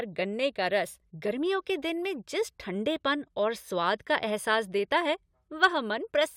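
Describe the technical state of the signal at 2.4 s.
At 2.4 s the speech signal is intact, with no dropout, distortion, glitch or other fault audible at that point.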